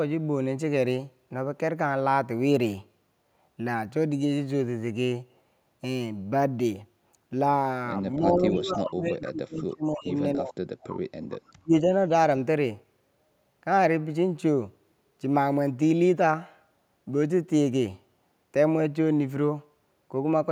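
Speech suppressed in double talk from 8.18 to 10.13 s, again at 10.35 to 10.6 s and at 11.49 to 11.74 s: the speech dips and cuts out in pieces, falling by roughly 25 to 40 dB at its deepest, most likely because an echo canceller, facing both sides talking at once, turned everything down. Echo leak at 9.07 to 9.31 s, inside that first dip, and briefly at 10.81 to 10.88 s: a faint copy of the speech returns about 290 ms late, some 20 to 30 dB below it, likely from loudspeaker pickup the canceller missed.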